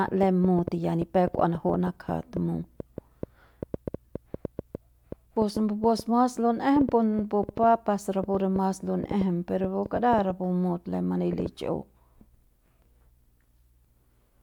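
From 0.08 s to 11.47 s a train of clicks runs through the speech, around fifty in all at an uneven 4.75 per second, peaking about 10 dB above the signal. The pulses share one shape and tick through pauses too, likely from nearby equipment interference or a faulty connection or power supply.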